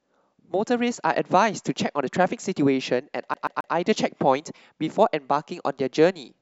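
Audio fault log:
3.34 to 3.74 s, CD stuck on one turn. A single slice of the speech, about 134 ms long, plays three times in a row, and each repeat starts with a brief mute. The loop is short and perfectly even, so it comes across as a fast mechanical stutter, not as a pause or a hesitation. That pattern points to a scratch on the disc. The laser loses its place and falls back one track at the same point on every turn.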